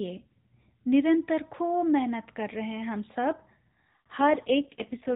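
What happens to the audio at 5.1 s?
At 5.1 s the clip is inside an AMR rate drop that runs from 4.18 s to the end. The codec spends fewer bits on the sound, which fits a fall from 12.2 to 4.75 kbit/s, so it turns buzzier and more synthetic. Unlike packet loss or a band switch, there is no gap and the narrowband range stays the same.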